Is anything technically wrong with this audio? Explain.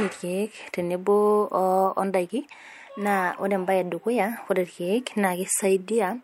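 No, nothing technical stands out here; the speech comes across without any audible problems.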